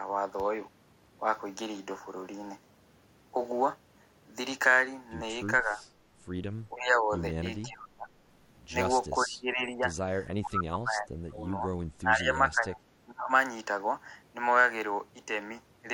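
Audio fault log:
5.63 to 13.3 s, speech suppressed in double talk: the speech sinks in level in seven patches, at 5.63 to 5.79, 6.72 to 7.1, 7.62 to 8.08, 9.19 to 9.9, 10.41 to 11.63, 12.01 to 12.92 and 13.08 to 13.3 s. The dips range from about 5 dB to about 30 dB, and the deepest dip, about 30 dB, falls between 10.41 and 11.63 s. The likely cause is an echo canceller that could not tell this talker from the far side's loudspeaker echo while both were sounding and turned the whole signal down.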